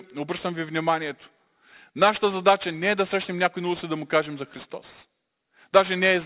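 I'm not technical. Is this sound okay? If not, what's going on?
No, there's aliasing from start to finish: the speech was shrunk to a lower quality without filtering first, so hissy sounds above about 4 kHz fold back as gritty, metallic noise.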